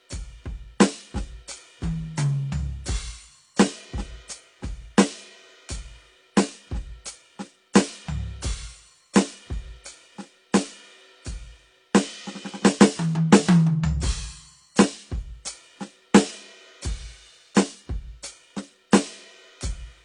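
Throughout the music, nothing sounds above about 10.5 kHz, and two layers of artefacts are heard at once: the smeared, swirly coding noise of a low-rate AAC pass plus the sizzly synthetic top of HE-AAC, likely transcoding between lossy codecs, unlike a single codec's uniform artefacts.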